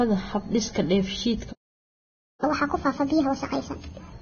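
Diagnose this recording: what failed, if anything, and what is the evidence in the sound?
The codec stage shows heavy damage throughout. Nothing reaches above 6.5 kHz, and the remaining treble sounds hissy and grainy. This is likely Vorbis compression at a very low bitrate. The encoder quantised the high-frequency residue so coarsely that detail turned into noise.

A playback stall cuts the speech off in mid-flow at 1.52 s. Silence lasts until 2.44 s, about 0.9 s. The likely cause is the player's buffer running dry or its thread being blocked. Output resumes once data is available again.

Catch-up at higher speed follows the stall in the playback stage. From 2.44 s to 4.12 s the speech runs 1.5 times faster. Pitch rises by about seven semitones. The player resampled its backlog to recover the lost time, then returned to normal speed.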